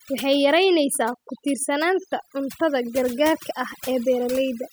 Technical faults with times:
0.00-4.72 overdone noise removal

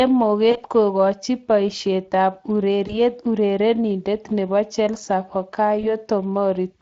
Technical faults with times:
0.00-6.81 Speex codec
0.51-0.64 VoIP packet loss concealed by the speech codec
2.87-2.99 VoIP packet loss concealed by the speech codec
5.81-5.85 VoIP packet loss concealed by the speech codec

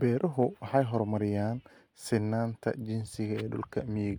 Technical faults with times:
none

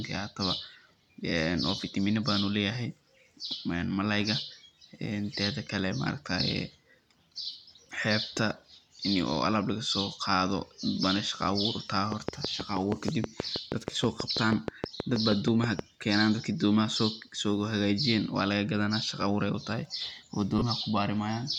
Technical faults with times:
7.52-7.55 lost LE Audio frames
12.12-15.80 train of clicks
13.01 lost LE Audio frames
20.58-20.62 lost LE Audio frames

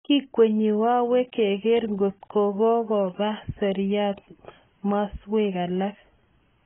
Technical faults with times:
0.00-6.65 AAC compression

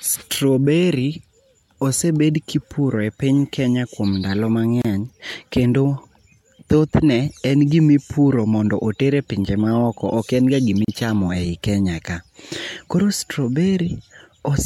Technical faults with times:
4.82-4.85 gap at a join of encoded pieces
10.85-10.88 gap at a join of encoded pieces

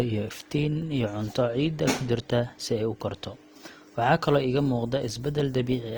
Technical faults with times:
0.00-5.97 Opus compression

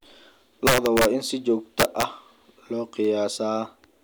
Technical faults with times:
0.67-1.05 integer overflow
1.80-2.03 integer overflow

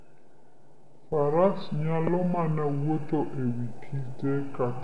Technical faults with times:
0.00-4.84 wrong sample rate

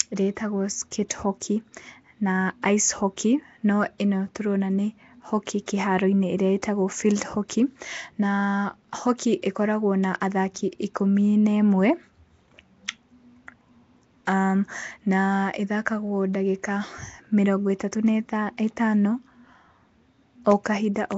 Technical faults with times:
0.00-21.18 Nellymoser compression

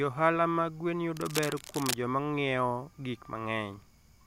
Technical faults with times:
1.17-1.94 cable scratch noise

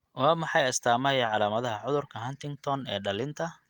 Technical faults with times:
1.25-1.29 short concealed packet loss

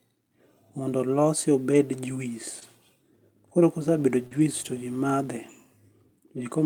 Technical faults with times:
1.71-1.73 lost packet rebuilt from error correction
2.59-2.63 short concealed packet loss
2.61-2.63 lost packet rebuilt from error correction
3.79-5.28 mains buzz
4.27-4.33 short concealed packet loss
4.31-4.41 lost packet rebuilt from error correction

